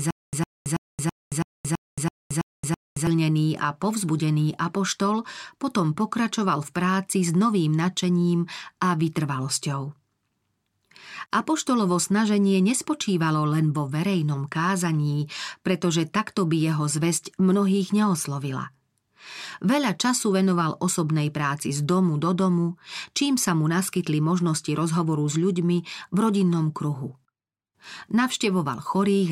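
Right from the start, already going when the clip opens, there's a stutter with silent gaps up to about 3.07 s: a 106 ms fragment of speech repeats nine times, each followed by 223 ms of dead silence, every 329 ms. Likely a stalled stream replaying its last buffer, so that stretch is simply lost.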